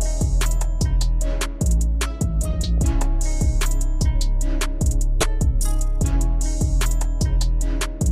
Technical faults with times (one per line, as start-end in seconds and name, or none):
2.78 corrupt frame decoded
5.20-5.23 corrupt frame decoded